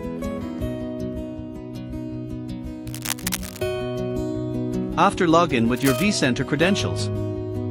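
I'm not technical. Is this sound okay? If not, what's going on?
No. Scratchy, rustling bursts cut across the sound from 2.87 to 3.62 s and, more faintly, from 5.76 to 6.03 s. This cable scratch noise likely comes from a worn lead or connector being moved.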